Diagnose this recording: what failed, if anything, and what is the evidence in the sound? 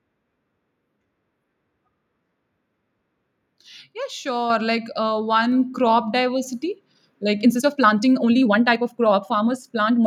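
At 4.5 s the speech and the background noise jump up together, by about 4 dB, in a single step. Nothing in the sound itself explains it. Because both rise at once, the change happened at the input, not in the talker. This is a microphone volume stepped up by call processing. Automatic gain control judged the input too quiet and raised the device's input level in one move.

From 7.39 s to the end of the clip, the speech suddenly runs fast, at about 1.65 times normal speed. The pitch does not rise with it. The delivery turns rushed. This is a time-stretched section. Software likely squeezed this part to fit a shorter length. It held the pitch steady by dropping short slices of audio.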